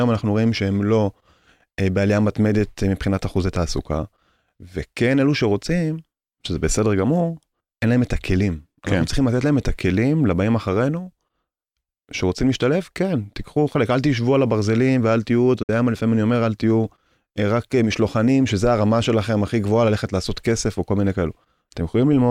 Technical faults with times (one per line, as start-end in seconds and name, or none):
15.62-15.69 AAC frame loss with muting